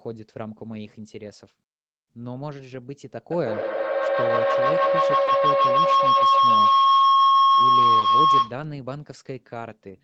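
At 3.31 s a feedback howl begins. The call's own output is reaching a nearby microphone, and each trip around that loop comes back louder, so the repeats narrow onto a tone around 1 kHz and swell to about 13 dB above the speech. The tone pulses at roughly 150 ms, the loop's round-trip delay. On a spectrogram it appears as a bright horizontal line near 1 kHz, beaded at that interval. The waveform's envelope climbs steadily until the howl stops at 8.65 s.

Underneath the howl, at 5.25 s, there is a short concealed packet loss: 20 ms of audio never arrived, and the receiver papered over it by extending the preceding sound. The result is a brief smear. On a spectrogram it shows as a narrow vertical strip where the harmonics blur or hold flat, and on the waveform as a short stretch of suspiciously repetitive cycles.

Straight after, at 5.27 s, comes a lost packet rebuilt from error correction. 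This stretch, about 20 ms, which fits a single lost packet, is played from the low-bitrate Opus copy carried in the next packet. It sounds slightly grainier and noisier, and shows as a thin patch of speckled, less defined energy within the band, which tops out at 8 kHz.

The same pair repeats later. There is concealment at 7.99 s, then another 20 ms error-correction rebuild at 8.01 s, each leaving the same brief smear and rough, noisy sliver just before the howl ends.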